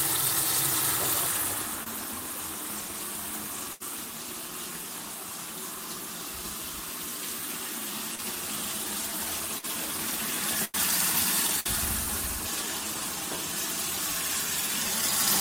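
A recording of everyday sound shows two kinds of network fault. Short concealed packet loss appears at 1.83 to 1.87 s and 8.15 to 8.19 s: 20 and 30 ms of audio never arrived in time, and the receiver extended the preceding sound, leaving brief smears or wobbles. Bursts of packet loss hit at 3.73 to 3.82 s, 9.58 to 9.65 s, 10.65 to 10.75 s and 11.60 to 11.66 s. There, 80, 50, 90 and 60 ms went missing, and the concealment stretched the last sound into a fading buzz or hiss before playback resumed further along.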